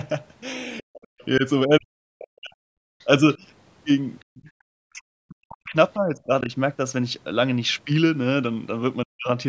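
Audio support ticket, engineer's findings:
Faint second voice audible under the talker: 0.80 to 1.25 s at about 25 dB below the speech, then brief scraps at 2.99 to 3.06 s (about 35 dB down) and 4.20 to 4.25 s (about 40 dB down). The other side's voice is leaking through, likely residual echo: far-end audio from the device loudspeaker reaching the mic and not fully subtracted by the echo canceller, so fragments pass with the near-end signal.

Talker's speech dipping and dropping out in pieces: 0.82 to 2.73 s and 4.30 to 6.51 s, roughly a second and a half of affected audio in each, plus a short dip at 9.05 to 9.28 s. Deepest drops near 40 dB. Speech suppressed in double talk, likely the echo canceller's suppressor: with both ends active it cannot separate near-end speech from echo and attenuates both. Upper band stops at 8 kHz, consistent with the call's mic processing.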